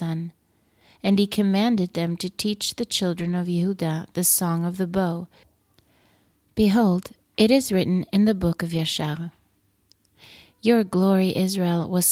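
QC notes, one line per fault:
2.09–2.15 s, 3.19–3.33 s, 7.61 s and 8.73–8.79 s: lost packets rebuilt from error correction. Each sits where lost audio was replaced by a coarse backup copy carried in the next packet. The first two follow "he commanded" and "to teach the", and the third comes just before "written in the book". There is no gap, but the patches sound grainy and hissy. Spectrograms show smeared, noisier harmonics, and the waveform stays continuous. The 20–80 ms lengths fit one to four lost 20 ms packets.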